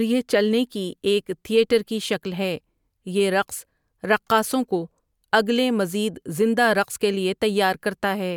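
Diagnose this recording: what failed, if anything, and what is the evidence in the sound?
Nothing failed: no stage of the chain, from capture to playback, leaves an audible mark on this speech recording.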